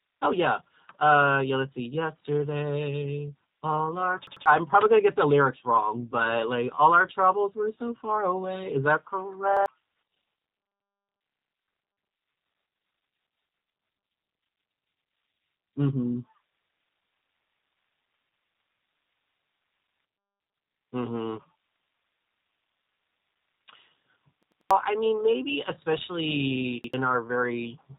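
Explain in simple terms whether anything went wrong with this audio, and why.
Two things went wrong here. The whole clip has been through the G.729 codec, a low-rate phone-call codec that rebuilds the speech from a rough model of the voice instead of sending the real sound. Everything above about 3.8 kHz is gone, so it sounds muffled and boxy, and the rebuilding is plainly audible as a slightly rough, synthetic, buzzy edge on the speech from start to finish.

On top of that there are five short stutters from a repeated buffer. The playback side ran out of fresh audio and filled the gap by replaying the last chunk, just under a tenth of a second long, which fits a 4096-sample buffer. You hear it at 4.27 to 4.46 s (chunk heard three times), 9.57 to 9.66 s (twice), 11.33 to 11.52 s (three times), 24.43 to 24.71 s (four times) and 26.84 to 26.94 s (twice). Each repeat has a hard join, and the real audio behind it, from about a tenth to a third of a second, is lost.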